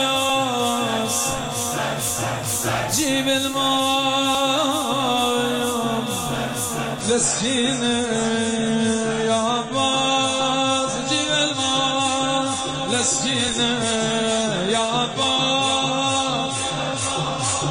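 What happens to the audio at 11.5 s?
At 11.5 s you're inside an adaptive stream at a lower bitrate, running from 7.01 s to the end: treble gone above 10 kHz, smearier artefacts, consistent with dropping to roughly 24 kbit/s.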